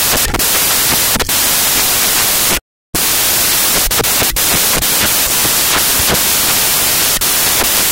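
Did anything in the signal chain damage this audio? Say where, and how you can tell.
Yes. The damage sits at the sample-format conversion stage, where samples are built from the wrong bytes for the whole clip. The speech is buried under loud, harsh noise from start to end, close to white on the louder passages. Misread byte order or alignment makes each sample's fast-changing low byte act as its high byte, so noise swamps the signal. Ordinary hiss or dither sits far below speech.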